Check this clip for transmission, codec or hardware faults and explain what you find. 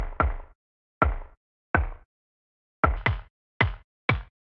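One fault is present. From 2.97 s to the end, the sound suddenly runs 1.5 times too fast and about 7 semitones (a fifth) higher. This is a wrong sample rate: the samples are played back faster than they were captured, with no conversion, so speed and pitch rise together. The 1.5 ratio fits audio recorded at 16 kHz being played at 24 kHz.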